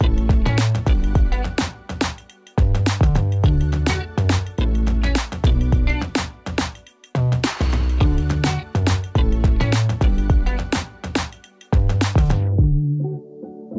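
No technical faults can be heard anywhere in the clip. The audio carries the character of a working call path, with nothing above 8 kHz, which points to a wideband call codec such as G.722.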